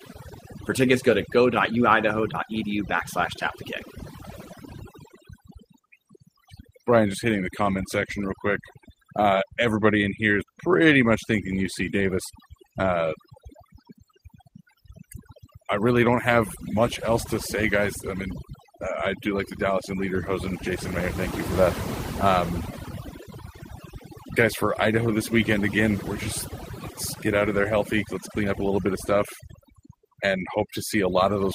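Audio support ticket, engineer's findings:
Background drops, breaking up into twinkling specks between phrases. Overdone noise removal: suppressor set too aggressive, pulling individual frequency bands down or out near its noise estimate, taking low-level speech detail with them.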